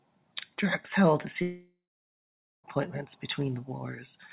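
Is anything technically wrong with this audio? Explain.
Yes. Right after "held a", at 1.42 s, the sound smears into a fading buzz, then near silence for about 0.84 s, resuming at 2.65 s with a stretch lost. This is likely a long network dropout: packets stopped arriving, so the receiver extended the last audio before going quiet.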